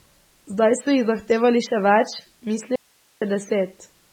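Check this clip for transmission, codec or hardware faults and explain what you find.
Two faults are present in this speech clip. Heavy MP3 compression runs throughout, and a short dropout falls near the end.

MP3 compression affects the whole clip. Nothing is left above 9 kHz, so the top end sounds dull. The damage is heavy. Consonants and s sounds turn watery and swirly, and onsets smear. The cause is likely a very low bitrate, around 16 kbps. Starved of bits, the encoder cut the treble and let weak frequency lines flicker on and off between frames.

An audio dropout to a faint residue runs from 2.76 s to 3.22 s, lasting about 0.46 s. The speech cuts off abruptly and returns just as suddenly. Only hiss fills the gap, roughly 40 dB below the speech. The likely cause is a lost signal upstream while the later stages stayed live, so their noise carried on through the break.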